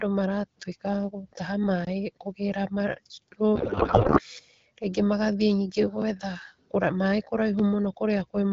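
A block of digital silence opens the fault list at 1.85 to 1.87 s, a hole of about 22 ms where the sound cuts out abruptly and returns with no fade. At that length it is heard as a short hole.

A codec payload misread follows from 3.56 to 4.22 s. The speech, carried by AMR-WB at light compression that fits 12.65 kbit/s, was packed octet-aligned but unpacked as bandwidth-efficient. The decoder therefore pulls every field from the wrong bit position and rebuilds plausible-looking frames from scrambled parameters. For about two-thirds of a second the speech gives way to garbled noise and warble that barely tracks it, until normal decoding resumes.

Three more blocks of digital silence come at 4.39 s, 6.02 s and 7.59 s, each only about 2 to 4 ms long. They are far too brief to be heard as gaps. Each sharp cut to silence and back registers as a single click or tick.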